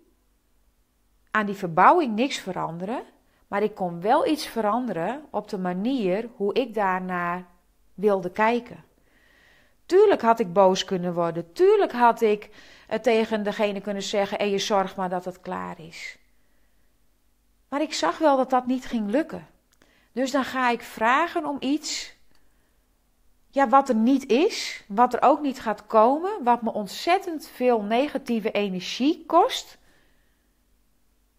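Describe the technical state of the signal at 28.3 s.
At 28.28 s an electrical switching spike, likely from a nearby switch arcing into the line, snaps sharply, peaking about -20 dBFS as one thin, full-band vertical stripe.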